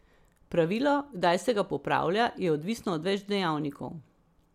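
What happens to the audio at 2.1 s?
Nothing goes wrong at 2.1 s; the speech carries on intact through that moment with no dropout, click or distortion.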